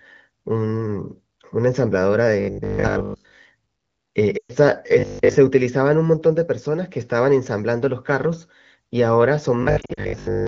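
A speech recording over AMR wideband (HD Voice), with clear, lightly coded band-limited sound that fits a rate around 15.85 kbit/s, is broken by two kinds of fault. From 2.40 to 3.38 s, 4.99 to 5.35 s and 9.63 to 10.47 s, the voice collapses into a rigid, metallic 50 Hz buzz that only loosely tracks the speech. That is robotic sound from repeated short buffers: audio likely arrived too seldom, so the player kept looping the last chunk, most of the time, and a 50 Hz pitch points to a 20 ms buffer. The lost AMR speech frames are heard as holes. From 4.38 to 4.55 s about 120 ms goes missing, which fits six 20 ms frames, and the decoder reuses the last good sound with falling gain, dropping to near silence within two frames. From 9.81 to 10.00 s roughly 100 ms is lost in short runs of up to 40 ms spread over 160 ms, giving a choppy flutter inside the final buzz.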